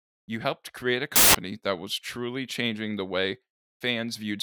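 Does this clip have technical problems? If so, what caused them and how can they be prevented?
Yes. From 1.16 to 1.35 s, after "helped create a", samples built from the wrong bytes cause loud, harsh broadband noise. Misassembled bytes promote the noisy low bits. Prevent it by enforcing correct byte order and sample alignment when reading.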